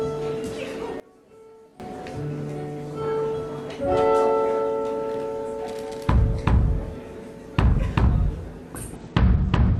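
One channel inverted, from 1.00 to 1.80 s: the audio suddenly drops by about 19 dB, leaving only a faint copy, then returns at full body. The likely cause is one stereo channel flipped in polarity, so everything the two channels share cancels when they are combined into mono, and only the small difference between them is left.

Bluetooth SBC bit pool drop, from 8.96 s to the end: the top end dulls abruptly and a gritty, granular noise rises through the remaining sound. The wireless link appears to have been squeezed, and the sender cut the SBC bit pool to keep the stream going, which fits a fall from 31 to 11, around 83 kbps. The highest sub-bands get few or no bits, and the rest are quantised coarsely.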